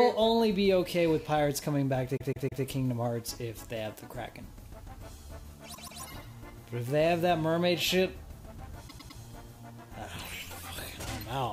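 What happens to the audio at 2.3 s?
At 2.3 s the audio stutters from repeated frames. Between 2.16 and 2.63 s, one block of about 157 ms, consistent with a short run of compressed frames, plays three extra times, so the decoder replays the same slice and the clip gains 470 ms. It sounds like a skipping loop. On a waveform the span shows four identical blocks side by side, and a spectrogram shows the same pattern tiled at 157 ms intervals.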